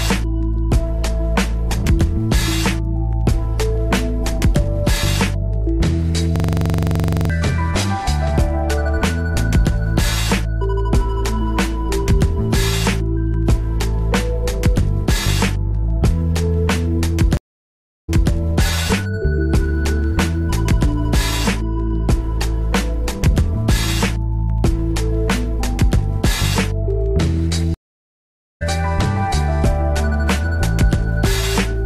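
A system hang loop runs from 6.36 to 7.30 s. The machine or its driver stalled while the sound hardware kept replaying one stretch of its ring buffer. A 42.67 ms fragment, which fits a 2048-sample buffer, repeats 22 times at 23.4 Hz. The result is a rapid, machine-gun stutter rather than a smooth tone. When playback recovers, about a second of audio has been skipped.

A stream reconnect follows at 17.37 to 18.32 s. The connection dropped, leaving 712 ms of silence, and a fresh decoder then picked up mid-stream. The audio resumes 232 ms earlier than where it broke off, so a short piece is heard twice. A second reconnect at 27.74 to 28.63 s brings 866 ms of silence, after which the audio jumps ahead by roughly a second.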